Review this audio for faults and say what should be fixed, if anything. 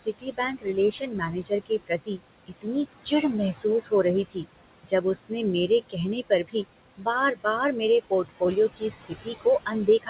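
Noise suppressor artifacts run through the whole clip. The suppressor pulls the steady room noise down by about 19 dB frame by frame, so the background sinks in the gaps and rises again beneath the talker. A gate would instead switch the noise fully on and off. Here it breathes continuously across frequency bands, and the room noise itself sits about 13 dB under the speech. Prevention: set the suppressor to remove less, closer to 10 dB, and give it a slower, smoother gain.

Speech cut by the noise suppressor happens in seven spans: 0.0–2.67 s, 3.05–3.92 s, 4.25–4.46 s, 4.83–5.32 s, 5.68–6.55 s, 6.97–7.46 s and 8.76 s to the end. Some speech is taken for noise and turned down, at worst by about 15 to 21 dB. In the opening span roughly a second in total is affected, and in the middle spans a fraction of a second, so consonants and endings sound swallowed. The dips follow the words themselves and are not a uniform loss, which separates this from packet loss or a level drop. 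The dull top, with nothing above 4 kHz, comes from the narrowband call codec, which fits G.711, and not from the suppressor. Prevention: lower the suppression strength or use a speech-aware model that protects low-level speech.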